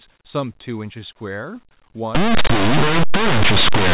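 From 2.15 s to the end the speech turns into loud, harsh distortion: linear audio read as companded. The samples were written as linear 8-bit but decoded as mu-law, so codes sitting just to one side of zero expand into huge values while their neighbours on the other side stay tiny, and the waveform gets shredded.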